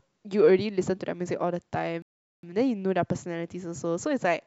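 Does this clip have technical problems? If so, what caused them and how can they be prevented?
Yes. The speech stops dead at 2.02 s and stays silent until 2.43 s, a rebuffering stall that adds about 410 ms to the clip. The player exhausted its downloaded audio and paused playback until more data arrived, then resumed at exactly the point where it stopped, so no speech is lost, only delayed. Prevention: keep a larger playback buffer and use adaptive bitrate switching so playback drops quality before it runs dry.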